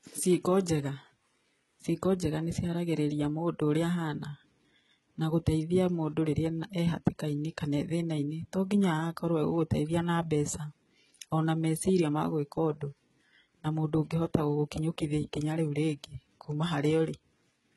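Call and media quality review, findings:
Gritty, metallic treble and lispy s sounds across the whole speech clip, nothing above 11.8 kHz. Likely HE-AAC compression, heavily squeezed, fitting roughly 16 kbps. Band replication fakes the top end from copied lower bands, so harmonics misalign.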